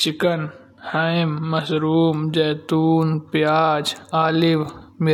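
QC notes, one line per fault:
0.0–2.0 s, adaptive stream starting at a low bitrate: the opening speech sounds thin and swirly, with treble that is missing or synthetic and nothing above about 14.9 kHz. Just before "जैतून प्याज" it suddenly becomes clearer and fuller, with no gap. The player began on a cheap rendition to start fast, consistent with HE-AAC around 24 kbit/s, then switched to a richer one, which fits AAC-LC at about 96 kbit/s.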